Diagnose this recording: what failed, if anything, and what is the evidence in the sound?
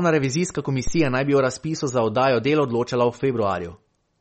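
The codec stage has plainly audible damage throughout, with watery, swirling artefacts and nothing above 8.4 kHz, which fits a bitrate around 32 kbps. This is likely MP3 compression. Its fixed treble cut and frame-to-frame flicker of weak components distinguish it from a plain low-pass filter.

A phantom power thump at the analogue input runs from 0.87 to 1.27 s. It is a deep thud decaying over about 90 ms, as a supply step passes through the coupling capacitors. Unlike a click or cable crackle, it is low-pitched and rounded rather than sharp.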